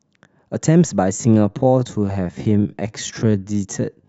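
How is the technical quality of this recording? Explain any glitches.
The recording runs into one clear problem: from 1.09 s through to the end, the speech sits in a time-stretched section. The pace suddenly drops to about 0.59 times normal speed, yet the pitch stays put. That's likely software stretching the audio to fill a longer slot, repeating short slices to pad it out while holding pitch steady. You hear it as a drag, with the syllables oddly drawn out.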